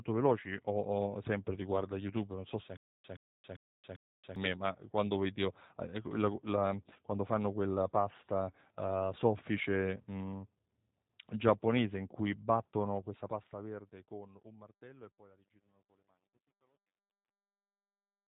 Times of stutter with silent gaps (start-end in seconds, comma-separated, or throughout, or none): 2.77-4.36